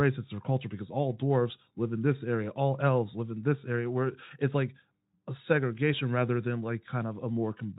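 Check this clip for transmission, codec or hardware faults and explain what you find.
No transmission, codec or hardware faults can be heard in the speech. The Speex coding leaves at most a faint trace on the sound, consistent with a fairly generous bitrate setting.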